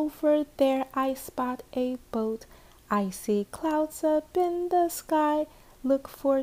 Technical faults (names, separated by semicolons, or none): none